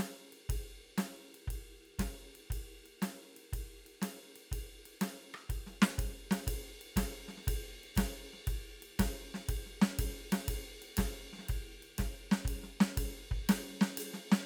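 No technical faults are audible anywhere in this music.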